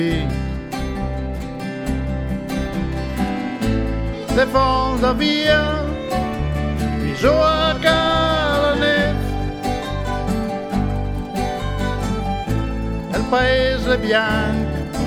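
No technical faults can be heard anywhere in the recording.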